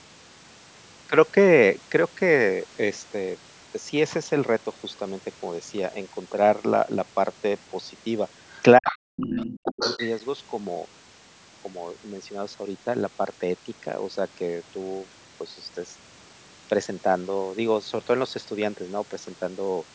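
Other side's voice leaking through at 8.52 to 8.62 s, 8.87 to 8.96 s and 9.16 to 10.15 s: a second voice comes in faintly at first, about 25 dB below the speech, then stronger at about 10 dB below, and finally at only about 5 dB below for nearly a second. The likely cause is a loudspeaker's output reaching the microphone and only partly removed by echo cancellation.

Speech suppressed in double talk at 8.78 to 9.03 s and 9.19 to 9.82 s: the main speech drops sharply, by roughly 40 dB and then roughly 35 dB, while the leaked voice overlaps it. The likely cause is the echo canceller turning down both voices because it could not separate the talker from the echo.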